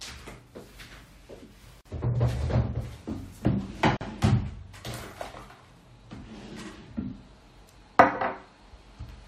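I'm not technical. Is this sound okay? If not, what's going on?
No. The audio was encoded in separate pieces and joined without trimming the padding each piece carries, causing a gap at a join of encoded pieces. You hear brief dropouts of silence, about 46 ms at 1.81 s and 44 ms at 3.97 s, before the sound resumes where it stopped.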